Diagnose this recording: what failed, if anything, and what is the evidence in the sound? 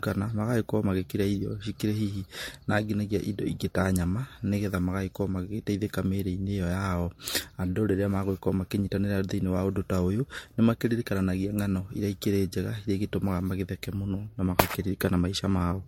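The fault sits in the codec stage and runs through the whole speech clip: the sound is swirly, hollow and smeared, with consonant attacks blurred, more than a single pass at the MP3 rate implied, around 64 kbit/s, would explain. That points to generation loss, likely from about four successive MP3 encodes. A spectrogram shows a hard ceiling with nothing above 16.6 kHz, patchy spectral holes and smeared onsets. Each re-encode quantises on a shifted frame grid, compounding noise.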